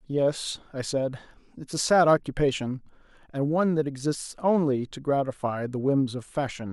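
No faults detected anywhere in the speech recording; nothing to log.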